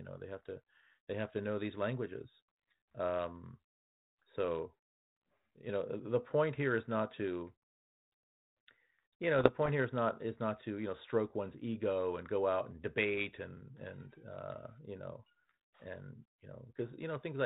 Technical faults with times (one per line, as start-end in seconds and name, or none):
9.39-9.70 bit errors on an ADPCM link